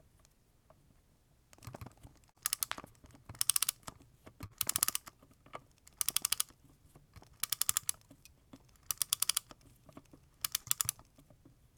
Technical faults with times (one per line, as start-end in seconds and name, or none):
2.31-2.38 short concealed packet loss
4.46-4.53 short concealed packet loss
10.62-10.69 short concealed packet loss